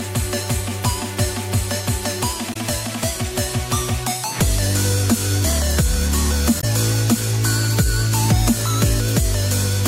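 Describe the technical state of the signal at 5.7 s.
At 5.7 s the signal is intact, with no audible dropout, distortion, or other technical fault.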